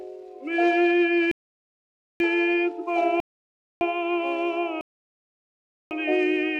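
At 1.31 s the sound drops to silence until 2.20 s, again from 3.20 to 3.81 s, and from 4.81 to 5.91 s, each time resuming exactly where it stopped. These are rebuffering stalls: playback ran dry of downloaded audio and waited, adding about 0.9, 0.6 and 1.1 s.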